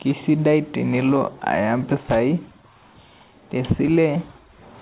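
No technical faults are audible.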